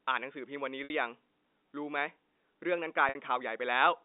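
Packet loss with pitch repetition occurs at 0.84–0.90 s and 3.09–3.15 s: each 60 ms gap is bridged by looping the last pitch period, which sounds like a buzzy, held tone.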